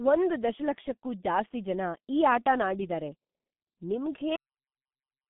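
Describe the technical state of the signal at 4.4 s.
At 4.4 s the signal is dead digital silence: the speech stops abruptly mid-sound at 4.36 s with no decay and stays silent to 5.30 s. This is a cut-off end: the final buffers were never written or played out, so the recording ends before the sound does.

Up to that cut, the speech is muffled and hoarse, with smeared consonants, from the G.723.1 codec. Nothing passes above 3.8 kHz, and heavy damage from its coarse 30 ms frame-by-frame voice modelling points to roughly 6.3 kbit/s.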